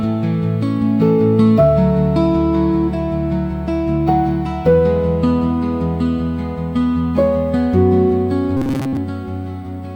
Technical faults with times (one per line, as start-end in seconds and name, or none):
8.57-8.97 robotic sound from repeated short buffers